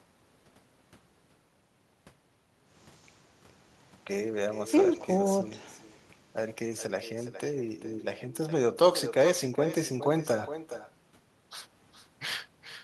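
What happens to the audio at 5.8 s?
At 5.8 s, as throughout the clip, there is echo with no canceller: the far end's loudspeaker feeds its microphone and nothing removes it, so the speech returns around 400 ms later, about 12 dB quieter, as a thinner shadow trailing each phrase.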